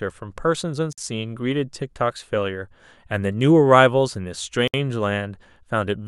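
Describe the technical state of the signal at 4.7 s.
Separately encoded pieces were joined untrimmed, leaving a gap at a join of encoded pieces from 4.68 to 4.74 s: a gap of about 62 ms cuts the speech before it resumes.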